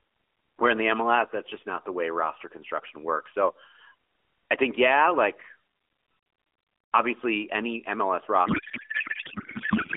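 Speech over an AMR narrowband mobile link, band-limited to roughly 300 Hz to 3.5 kHz with light codec colouring that fits the 12.2 kbps mode. From 8.46 s to the end there's a codec payload misread: the speech turns into garbled warble and noise, which fits octet-aligned AMR frames being unpacked as bandwidth-efficient.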